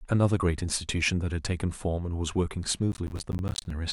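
From 2.92 to 3.71 s, processor overload crackle: buffers of roughly 10 ms repeatedly miss their deadlines, dropping to silence, producing gritty tearing crackle over the speech.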